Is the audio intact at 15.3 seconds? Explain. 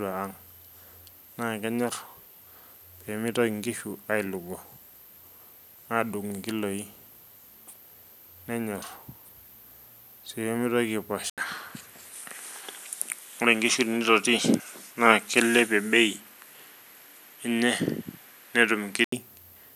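No. From 11.30 to 19.12 s the speech is band-limited, with nothing above 12.5 kHz, a level shift of around 5 dB and a new noise floor well below the signal, after an 80 ms gap. This is likely the input switched to a poorer device.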